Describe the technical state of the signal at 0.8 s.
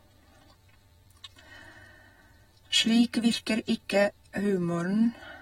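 At 0.8 s the speech carries audible codec damage that runs through the whole clip, likely AAC compression. Content stops near 16.7 kHz, and coarse quantisation of the spectral lines leaves the sound dull and smeared, with a fizzy, warbling edge on sibilants, consistent with a low bitrate of roughly 40 kbps.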